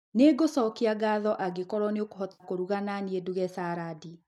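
At 2.33 s, after "ngatho angĩkorwo nĩ", AAC frame loss with concealment drops 70 ms of audio. The decoder rebuilds the gap from earlier spectrum, leaving a smeared, phasey patch.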